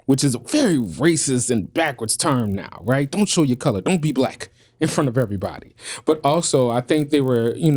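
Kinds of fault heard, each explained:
Resampler restarted on every block: a 50 Hz buzz rides under the speech and drops away in pauses. Each 20 ms block was converted from 24 kHz to 48 kHz on its own, leaving a small error at every block edge.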